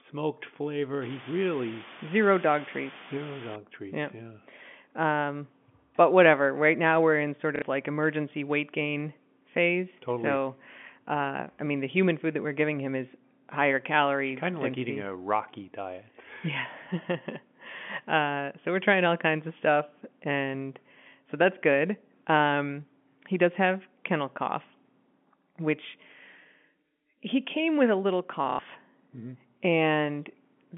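Low bit depth with dither runs from 1.02 to 3.56 s of this telephone-band speech: the sound is reduced to about 6 bits, and the dither turns the coarse rounding error into a steady, even hiss sitting only around 10 dB below the speech, with no audible distortion. Packet loss with last packet repeated occurs at 7.56 to 7.62 s (60 ms) and 28.50 to 28.59 s (90 ms), where the receiver replays the last received audio until fresh data arrives. The gaps produce a brief robotic stutter, which fits repeated 30 ms packets buzzing at roughly 33 Hz. The G.711 line itself limits the sound to about 150 Hz to 3.5 kHz.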